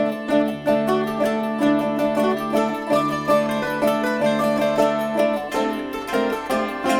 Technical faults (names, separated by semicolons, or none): none